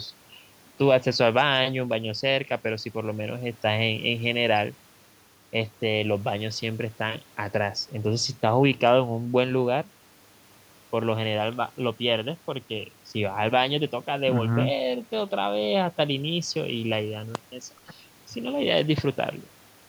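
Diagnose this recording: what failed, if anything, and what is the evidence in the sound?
Nothing seems to have gone wrong anywhere along the chain here; I listened through the speech and there's no fault I can point to.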